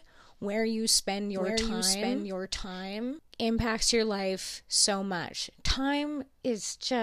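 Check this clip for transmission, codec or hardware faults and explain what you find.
One fault is present: a doubled audio track between 1.35 and 3.19 s, starting after "where you spend" and ending before "impacts your life so". A second copy of the speech runs about a second behind the original and somewhat quieter, full-band and dry. The likely cause is the signal being picked up twice, once through a slower route. Unlike an echo or reverb, it has no decaying tail or room colour, and it switches in and out abruptly.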